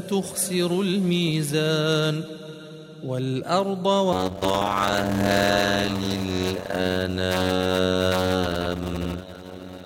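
A block size mismatch (padded) begins at 4.12 s and continues to the end. Each 256-sample block lands in a larger slot, which fits about 480 samples, topped up with silence. This gives a 91.9 Hz buzz, and the audio plays at 0.533 times normal speed while keeping its timbre.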